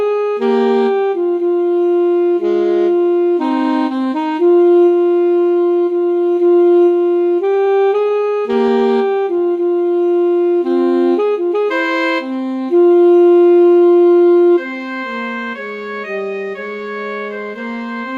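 Between 7.35 and 9.41 s the audio picks up a run of brief ticks, smears and hiccups. These are scattered short gaps: about fifteen holes of up to roughly 15 ms each, around 150 ms in total, where packets went missing or arrived late and the receiver bridged each one by extending the preceding sound. Right after, from 9.46 to 11.33 s, the audio drags at about 93% speed with its pitch unchanged, adding 141 ms and drawing sounds out. This is a jitter buffer slow-down, where the receiver repeated pitch periods to rebuild a depleted reserve. From 13.23 to 14.73 s the opposite happens. The audio hurries along at about 110% speed, again at the same pitch, with roughly 150 ms cut out. This jitter buffer speed-up came from the receiver trimming pitch periods to shed excess buffered delay.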